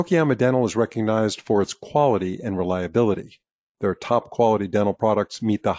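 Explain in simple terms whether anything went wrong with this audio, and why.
Nothing went wrong; no problems can be heard here.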